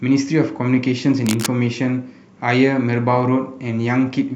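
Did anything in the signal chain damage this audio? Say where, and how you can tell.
Yes: cable scratch noise at 1.26–1.46 s, dense uneven crackle about 10 dB below the speech, likely a worn analogue cable or connector whose contact resistance fluctuated while moved.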